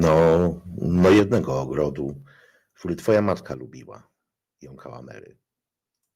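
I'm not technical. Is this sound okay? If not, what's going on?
No. The speech has two related problems.

First, microphone overload. From 0 to 0.48 s, 0.95 to 1.39 s and 3.08 to 3.33 s, the loudest parts sound harsh and crackly. This is likely because the microphone level was set too high, so the tops of the loudest sounds get flattened. The worst stretch is around 1 s.

Second, microphone volume stepped down. At 0.2 s, 1.2 s and 3.54 s, the whole sound suddenly gets quieter in one jump. This is likely the call software noticing the overload and turning the microphone down. The drop at 0.2 s is small. The drops at 1.2 s and 3.54 s are much bigger.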